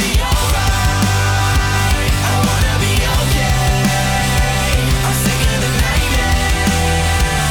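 Nothing in the audio gives a listener anything to flag, since there are no dropouts, clicks, distortion or timing slips anywhere along it.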